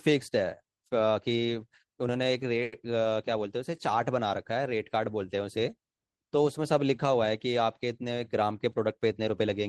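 A speech recording in which, from 2.63 to 2.73 s, a sound is held unnaturally long with a faint buzzy, dipping quality before the talk resumes exactly where it left off. This is a short stall from a late packet. The jitter buffer ran dry, so the receiver stretched the last sound by 90 ms until the data arrived, losing nothing but adding 90 ms of delay. Between 8.42 and 9.50 s the speech turns hurried, running at about 108% speed with its pitch unchanged. This is jitter buffer speed-up. With excess audio queued, the receiver trimmed many pitch-period slices, roughly a tenth of a second in all, to cut back the accumulated delay.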